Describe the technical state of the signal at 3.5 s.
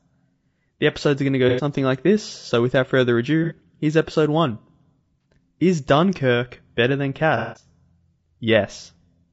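AAC frame loss with concealment runs from 3.44 to 3.53 s, between "this so without further" and "here's episode". About 60 ms of audio, probably a couple of consecutive frames, never arrived, and the decoder rebuilt the gap from the last good spectrum. The result is a brief smeared, noisy, phasey patch instead of clean speech.

The speech there also carries plainly audible low-delay AAC compression damage, likely from AAC-ELD at a low rate around 32 kbps. Its short frames resolve pitch harmonics poorly, so the voice sounds rough and grainy, with noise between the harmonics.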